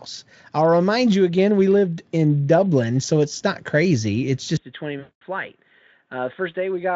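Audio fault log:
4.57 to 6.96 s, input switched to a poorer device: At 4.57 s the sound turns dull and boxy with no gap. Nothing is left above 3.8 kHz, so the top of the band is simply gone. The level drops by about ten decibels. A faint new background hiss appears, well below the speech. A narrower band, a lower level and a different noise arriving all at once likely mean the recording moved to another microphone or a headset's call profile.
4.99 to 5.22 s, VoIP packet loss concealed by the speech codec: Inside the duller stretch, about 220 ms of audio drops out and is filled in. The decoder keeps repeating its last pitch and spectral shape, so the sound smears into a buzzy, coloured tone that fades as the gain is stepped down. The length fits a run of about eleven 20 ms frames going missing. Each rebuilt frame leans on the one before, so the sound stays weak or distorted for a while after the packets return.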